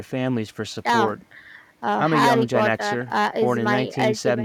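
No technical faults can be heard anywhere in this speech.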